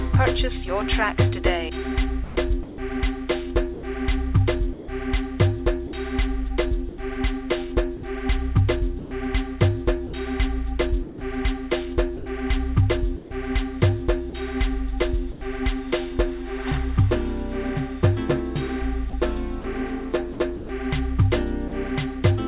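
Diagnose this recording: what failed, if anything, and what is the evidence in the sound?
Call processing at the sender likely misbehaved: its voice detector kept toggling transmission, so the sound was chopped by the voice detector from 2.24 to 15.41 s and 19.1 to 21.71 s. Quiet stretches totalling 1.44 s and 0.27 s became comfort noise, leaving choppy sound.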